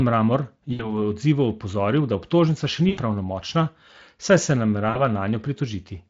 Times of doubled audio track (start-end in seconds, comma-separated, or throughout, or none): none